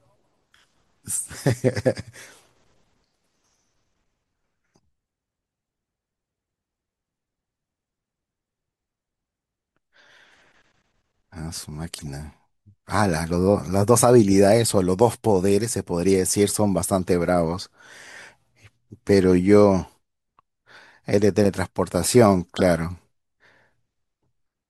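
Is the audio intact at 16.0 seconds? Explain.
Yes, the speech at 16.0 seconds plays through cleanly, with no dropout, click, distortion or other fault at that moment.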